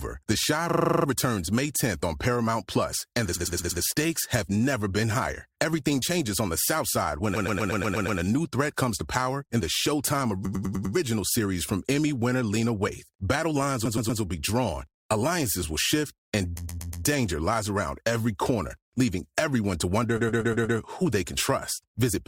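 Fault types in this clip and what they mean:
Repeated frames: a short run of compressed frames was delivered more than once, so the decoder replays the same slice of speech back to back, producing a stutter. Here it happens at 0.69, 3.35, 7.35, 10.45, 13.85, 16.57 and 20.17 s. The looped block is 40 ms at first, then 100 to 120 ms, repeating three to nine times, and each event stretches the audio by 360 to 840 ms.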